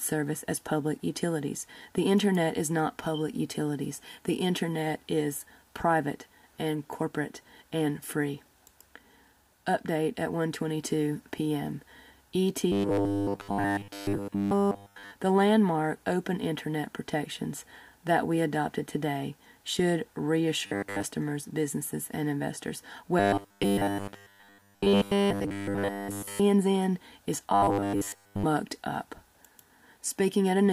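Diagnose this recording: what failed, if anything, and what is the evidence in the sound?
The driver or buffer stage failed, producing robotic sound from repeated short buffers at 12.72–15.11 s, 20.66–21.02 s, 23.20–26.40 s and 27.54–28.43 s. The sound becomes a rigid metallic buzz at 100 Hz, which fits a 10 ms chunk likely being replayed while fresh audio fails to arrive. The first and third spans are repeated throughout, the other two mostly. A spectrogram shows evenly spaced 100 Hz harmonic stripes, and the waveform shows identical cycles repeating.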